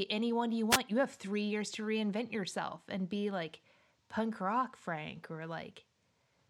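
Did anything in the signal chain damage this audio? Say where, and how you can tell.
Yes, a wireless microphone noise hit in the radio link feeding the analogue input: a brief static swish from 0.70 to 0.79 s as the FM signal faded.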